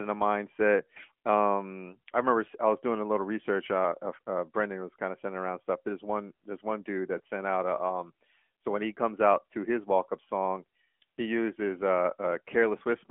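From start to finish the speech carries the sound of the AMR narrowband mobile codec, and the damage is plainly audible. Nothing gets through below about 200 Hz or above 3.4 kHz, so it's thin and boxy. At 10.2 kbps the vocal-tract model sounds noticeably buzzy and synthetic.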